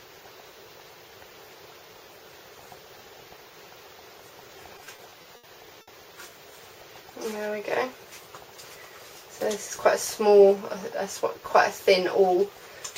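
From 4.77 to 5.45 s there are repeated stalls (stutter). Packets kept arriving late, so the jitter buffer ran dry six times, and the receiver held the last sound for about 160 ms in total, the longest hold 70 ms. The audio drags and judders. On a spectrogram, flat, smeared horizontal bands replace normal movement, and the waveform shows dips where the held sound fades.

At 5.81 s a short stall from a late packet holds one sound for about 60 ms before playback resumes where it stopped. It is heard as a brief hang with a faint buzz or dip, and it appears on a spectrogram as one short frozen stripe.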